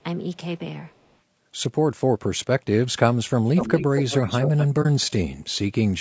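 Throughout, the speech sounds rough and grainy, with noise filling the gaps between harmonics. This points to low-delay AAC compression, likely AAC-ELD at around 32 kbps, not to narrowband filtering.

From 0.86 to 1.16 s, a very faint delayed copy trails the speech by about 278 ms. From 3.46 to 4.67 s, a much stronger copy follows about 235 ms behind. This is likely an echo leak, where the far end's canceller let the loudspeaker signal through. It differs from reverberation because it is a distinct, delayed repeat.

At 4.82 s, an AAC frame loss with muting leaves a brief 30 ms dip that fades out and back in, unlike a hard dropout.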